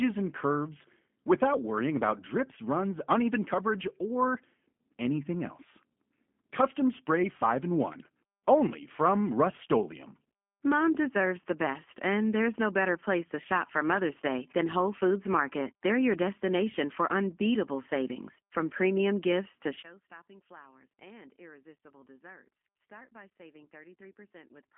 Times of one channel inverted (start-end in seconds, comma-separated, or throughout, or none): 19.82-24.78